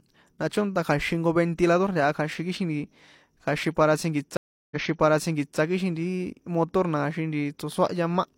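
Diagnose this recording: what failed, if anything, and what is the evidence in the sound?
Network stream reconnect. After "kja̱xin para tsjínkiṭs" at 4.37 s, the sound stops for 0.34 s. It resumes 0.88 s earlier and replays that stretch. The player reconnected and restarted its decoder on a resent burst.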